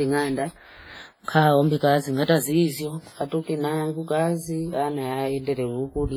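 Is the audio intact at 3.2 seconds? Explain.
No. At 3.2 seconds, as throughout the speech, the sound is washy and ringing with hiss that breathes alongside it. This is likely WMA compression: long transform blocks smear quantisation noise, which fits a 24 kbps bitrate.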